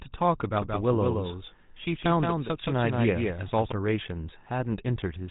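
Speech coded throughout with the GSM full-rate codec, giving a plainly audible buzzy, gravelly roughness that fits a 13 kbps full-rate stream. Its pulse-driven vocal-tract model smears the natural excitation. A spectrogram shows a hard ceiling near 3.8 kHz, with coarse, blotchy harmonics beneath it.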